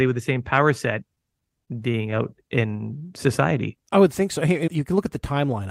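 From 1.15 to 2.21 s the speech suffers repeated stalls, a stutter. Packets arrived late or slower than playback, so the jitter buffer kept running dry. Eleven times the receiver stretched the last sound to cover the wait. Each gap is brief, the longest about 21 ms. Together they fill about 120 ms, roughly a tenth of that stretch. Nothing is lost. The speech drags and catches in a halting stutter.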